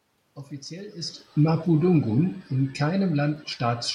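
Speech that sinks steadily by about 5 dB from 1.64 s to the end, room noise and all: automatic gain falling as the gain control reacts to input that is too loud or background noise that is too strong.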